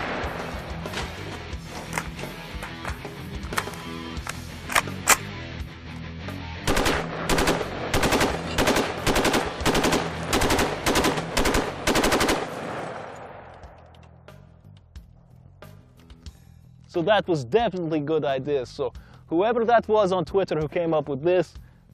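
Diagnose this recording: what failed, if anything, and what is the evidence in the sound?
Nothing stood out on listening that would point to a failure at any stage of the recording or playback chain.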